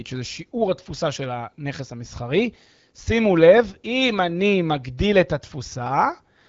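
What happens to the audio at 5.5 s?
Nothing goes wrong at 5.5 s; the speech carries on intact through that moment, still with the band-limited sound of the wideband AMR phone codec.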